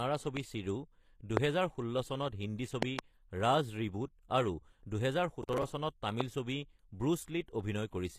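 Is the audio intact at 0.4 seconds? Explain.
No. A single loud pop runs from 0.37 to 0.39 s, likely a voltage spike from a plug, switch or static. It lands as a sharp crack roughly 15 dB above the speech, which continues underneath. Throughout the clip there is also low-bitrate audio saved at a high bitrate, likely a 24 kbit/s HE-AAC file re-encoded as 256 kbit/s MP3. It keeps the first codec's losses, with nothing above 14.9 kHz.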